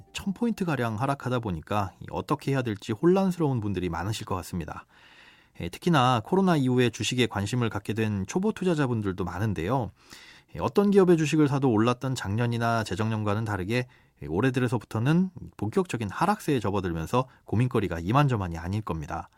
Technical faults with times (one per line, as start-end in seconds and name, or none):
none